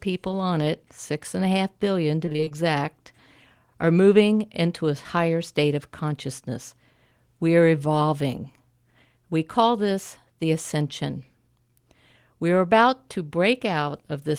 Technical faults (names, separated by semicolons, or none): repeated packet loss (robotic sound)